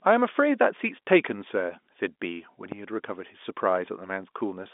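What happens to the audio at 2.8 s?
Right around there you get a phantom power thump, running from about 2.72 to 2.80 s. A supply got switched on or off on a live mic input, and that sudden voltage step pushed straight through the coupling capacitors into the signal. What comes out is a short, deep low-frequency bump, dying away fast, with a decay of about 18 ms, so it's more of a dull knock than a boom, sitting on the narrow telephone-band sound.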